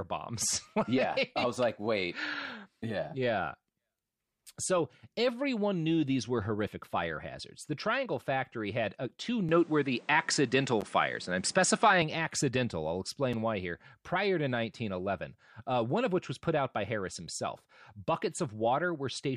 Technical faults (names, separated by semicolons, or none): input switched to a poorer device; block of digital silence